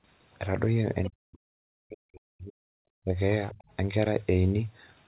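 At 1.04 to 1.1 s a faint second voice slips in, about 15 dB under the speech, brief. This is the other side's voice leaking through. The far end's audio, played from the loudspeaker, likely reached the microphone, and the echo canceller left a residue. It returns at 3.49 to 3.64 s, quieter at about 25 dB down. Both scraps share the narrowband sound of the G.711 path, which carries nothing above 4 kHz.

Right after the first leak, from 1.1 to 2.66 s, the speech sinks sharply for about a second and a half. At its deepest it is some 40 dB down, so it nearly vanishes in places. Shorter dips follow at 3.04 to 3.16 s, roughly 20 dB, and at 3.54 to 3.59 s, also about 20 dB, inside the second leak. This is speech suppressed in double talk. With both sides likely talking at once, the echo canceller could not tell the talker from the echo and pushed everything down together.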